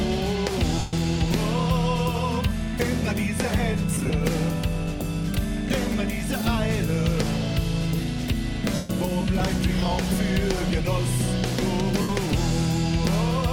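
At 0.78, 3.94, 8.75 and 12.01 s there are lost LE Audio frames, gaps of about 0.14, 0.10 (scattered, runs around 30 ms), 0.14 and 0.08 s. The LC3 decoder patches them by replaying the last spectrum with random signs, so tones smear into noise, fading on the longer ones.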